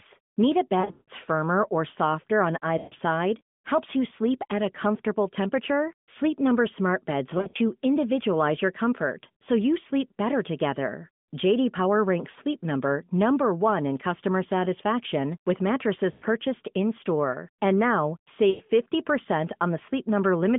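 Speech over an AMR narrowband mobile link, with nothing passing above 4 kHz. Lost AMR speech frames cause dropouts at 0.80–1.10 s (before "firmer or softer on"), 2.78–2.94 s (after it), 7.38–7.57 s (before "you individualize your comfort"), 16.12–16.24 s and 18.50–18.63 s. Failed frames make the decoder repeat the last good settings at falling gain. The sound smears and fades, then returns.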